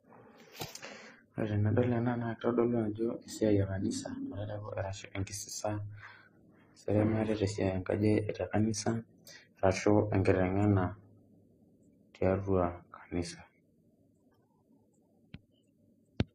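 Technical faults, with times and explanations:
Throughout, transcoding between lossy codecs: the speech has several kinds of codec smear stacked together, and nothing above 14.9 kHz. That's likely a low-bitrate chain, something like MP3, then HE-AAC, then Vorbis, each re-encoding the last one's artefacts while the lowest cut-off sticks.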